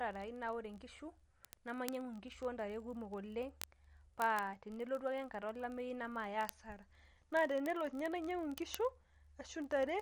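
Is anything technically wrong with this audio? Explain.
Yes. Two faults run through this speech clip.

MP3 compression is audible for the whole length. Nothing reaches above about 11.1 kHz, so the treble is cut off flat. The damage is plain. The sound has a watery, swirly quality, and s sounds turn chirpy and metallic. This fits a low bitrate of around 48 kbps. At that rate the encoder likely ran short of bits. It dropped the top band and zeroed weak frequency lines that flicker between frames.

Word clock ticks start at 0.11 s and continue to the end. They come at a steady rate of roughly one every 20 ms, several hundred in all. Each is sharp, and their strength varies. The receiving device runs on its own clock, not locked to the sender's. The two differ by roughly 1000 ppm. Each time they slip past each other, a sample is dropped or repeated, and a tick results.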